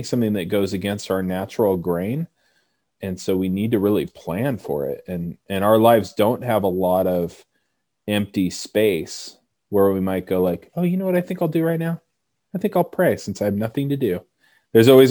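Speech throughout, with imaging from sample-and-hold upsampling across the whole clip. There's a bright, metallic fizz sitting about 29 dB under the voice in the 12 to 24 kHz band, swelling and fading with the speech and sliding opposite to its pitch. That mirrored band points to a 24 kHz source doubled to 48 kHz by just repeating samples, with no filter to clear out the spectral copies above the old limit.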